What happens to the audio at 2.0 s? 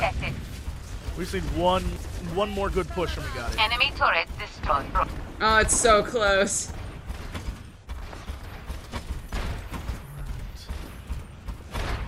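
Chunks out of order, 1.96 to 2.13 s: one 85 ms chunk plays a chunk late, swapping with its neighbour, so the sound briefly jumbles across three hard joins.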